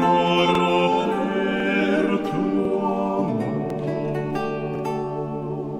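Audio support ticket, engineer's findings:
Overlapping chunks: chunking/streaming stage starts each 1.0 s chunk before the previous one ends, so a 50 ms piece plays twice at each join. Audible stutter or click at 0.55–0.60, 1.60–1.65, 2.65–2.70, 3.70–3.75 and 4.75–4.80 s.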